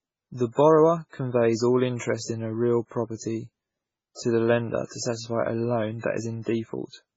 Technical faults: MP3 compression

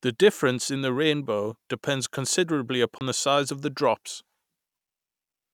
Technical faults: Bluetooth stall

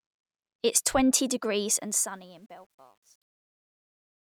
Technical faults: truncation distortion on a fade

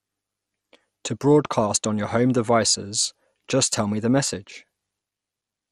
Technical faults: MP2 compression

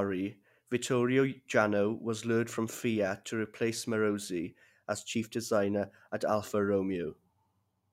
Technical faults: none

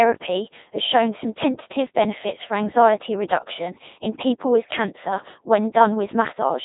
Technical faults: Codec 2 vocoder

